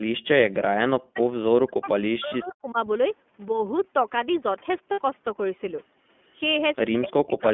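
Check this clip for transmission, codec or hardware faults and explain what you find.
The speech carries four kinds of fault: narrowband iLBC coding throughout, a brief echo-canceller gate at the start, repeated dips consistent with double-talk suppression, and two short concealed packet losses.

iLBC codec: The line is limited to roughly 200 Hz to 3.4 kHz, so everything above 3.4 kHz is gone, including the upper band the call's microphone processing would have passed. The codec rebuilds the excitation afresh every 20 ms frame, and the coarseness fits its 15.2 kbps mode. The damage is plainly audible: the voice sounds boxed-in, slightly rough and synthetic.

Background gated by the echo canceller: From 0 to 0.04 s, the canceller judged that loudspeaker output was present and clamped the microphone path by about 22 dB. For those 40 ms, the room sound is pulled down sharply and then released. 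It is heard as a brief dip right at the opening, before the ambience settles to its normal level.

Speech suppressed in double talk: The talker's level collapses by around 35 to 40 dB in four stretches: 1.01–1.21 s, 1.38–1.90 s, 2.15–2.78 s, and 6.98 s to the end at 7.53 s. The likely cause is the echo canceller failing to separate the near talker from far-end echo while both sides were active, so it attenuated everything. Each stretch lasts a fifth to half a second. The voice thins, fades or breaks into fragments.

Lost iLBC frames: Packets went missing at 2.28–2.33 s and 4.92–5.00 s. The gaps last 40 ms and 60 ms, which fits two and three lost 20 ms frames. The decoder filled each gap by repeating the last pitch cycle blended with noise. The result sounds like a briefly frozen, faintly buzzy or breathy vowel. The first gap falls inside a suppressed stretch. Because iLBC frames decode independently, normal speech returns almost immediately after each gap.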